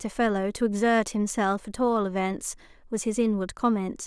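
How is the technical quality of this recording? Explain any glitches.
No glitches can be heard anywhere in the recording. There is nothing in it that calls for an explanation.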